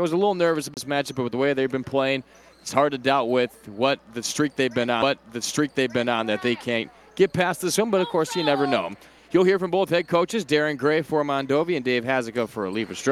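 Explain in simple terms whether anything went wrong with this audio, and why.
Two CD skips occur, at 0.74–0.77 s and at 5.02 s. A knock or disc flaw made the laser jump tracks, so the player briefly muted, a few hundredths of a second the first time and barely a moment the second, then resumed from a different spot.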